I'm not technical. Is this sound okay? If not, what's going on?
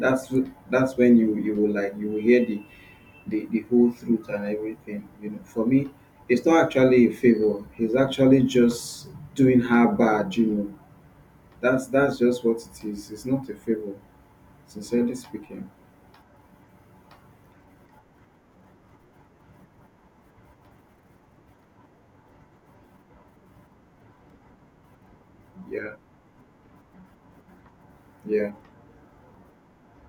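No, there's one glitch: a repeated buffer at 24.3 s. A tiny slice of speech, just over a millisecond, plays twice, so you hear a quick click.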